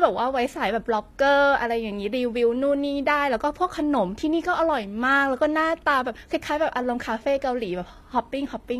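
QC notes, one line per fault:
Throughout, likely HE-AAC compression: treble sounds copied up from lower bands, so s sounds turn gritty and metallic; nothing above 14.9 kHz, fitting about 24 kbps.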